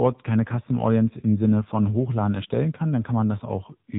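From start to finish the speech carries the AMR narrowband mobile codec sound, with heavy damage. Nothing passes above about 3.8 kHz, so sibilants and breath detail are gone and the voice sits in a closed, telephone-like band. The codec rebuilds each 20 ms frame from a vocal-tract model excited by a few pulses. At this low rate that leaves a buzzy, synthetic timbre, which fits one of the lower AMR-NB modes, around 6.7 kbps.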